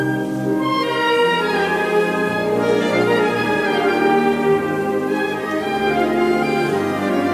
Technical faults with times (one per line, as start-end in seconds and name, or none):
none